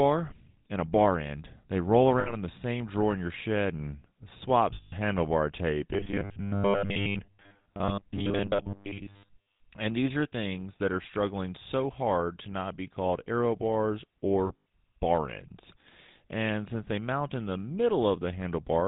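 GSM full-rate codec runs throughout: the vocal tract is modelled and driven by coarse pulses, cutting everything above 4 kHz and leaving the speech plainly buzzy and gravelly.

Lost GSM frames occur at 2.2–2.34 s, just before "in the same drawer", and at 4.74–4.93 s. Missing frames are filled by repeating the last good one at falling level, giving a brief metallic ring lasting about 60 ms and 180 ms.

Robotic sound from repeated short buffers runs from 5.94 to 9.60 s, after "handlebar tape". It is a rigid 100 Hz buzz, likely from a roughly 10 ms chunk replayed in place of most of the real audio.

Lost GSM frames return at 14.46–14.65 s, between "be called arrow bars" and "bar ends". About 120 ms is lost in short runs over 200 ms, the longest around 70 ms, heard as rough metallic flutters.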